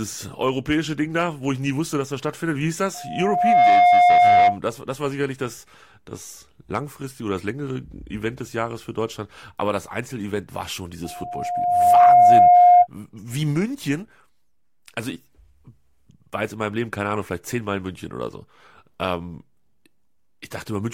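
At 2.94 s a loudspeaker feedback squeal starts in the speech. A steady 712 Hz tone swells up in under a second and rings until 4.59 s. The microphone is hearing the loudspeaker it feeds. At 712 Hz the loop gain passes one, so that frequency keeps growing on its own. It peaks roughly 15 dB above the speech. The same squeal returns from 11.04 s to 12.87 s, at 712 Hz again, building over about a second.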